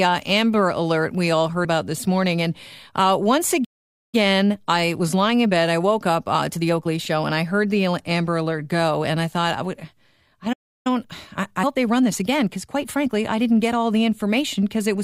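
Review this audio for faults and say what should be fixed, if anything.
At 1.65 s, between "we all" and "about this morning", the speech jumps ahead. These are compressed frames skipped: about two 32 ms frames, around 70 ms of speech, were missing or rejected as damaged. Checksums with error concealment or retransmission would prevent this.

The speech cuts to silence for 0.49 s at 3.64 s, after "uh once", and for 0.33 s at 10.52 s, after "thought I would I". This is a playback stall, likely the player running short of data or its thread being blocked. A larger playback buffer and a higher-priority audio thread would prevent it.

After each stall, from 4.15 to 7.15 s and from 10.87 to 13.77 s, the speech is hurried at normal pitch. This is time-compressed catch-up at 1.1x, cutting and cross-fading small pieces to shrink the backlog. Preventing the stalls removes the need for it.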